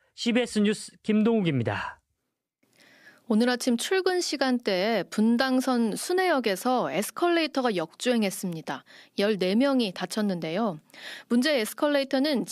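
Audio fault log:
No fault is heard in this speech clip.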